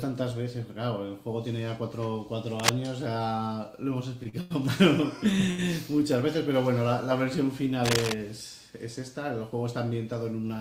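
From 2.59 to 2.79 s, a burst of scratching rustle sits over the sound, about as loud as the sound itself. This is cable scratch noise. A worn cable or connector being moved is the likely cause, its contact changing rapidly.

Short stalls from late packets follow at 4.23, 4.29, 4.41 and 5.50 s. Each time, a packet arrived late and the jitter buffer ran dry. The last sound is held for 16, 37, 95 and 78 ms, with a slight buzz or dip. Playback then resumes where it stopped, with nothing lost.

A second patch of cable scratch noise, equally loud, runs from 7.85 to 8.13 s.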